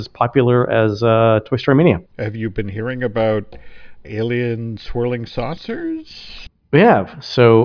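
No faults detected anywhere in the speech recording.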